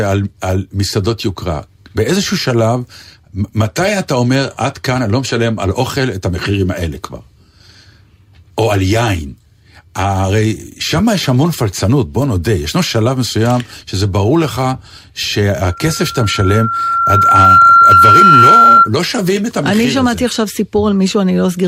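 Speech clip, with a loudspeaker feedback squeal from 15.63 to 18.90 s: a 1.4 kHz tone swells over roughly two seconds to around 10 dB above the voice as the mic-speaker loop runs away.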